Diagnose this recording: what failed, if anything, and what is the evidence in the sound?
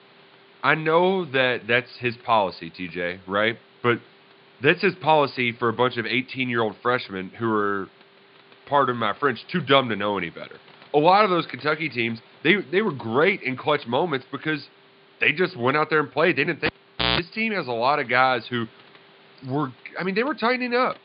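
A cable pulled and plugged in at the analogue wiring stage interrupts the speech between 16.66 and 17.19 s. A pop marks the disconnection, then the signal drops to near silence for about 475 ms, leaving only the faint room noise well below the speech. As the plug goes back in, the tip touches before the sleeve grounds, so a 60 Hz mains buzz bursts through for about 166 ms. A second pop follows, and the speech resumes on "team has a lot".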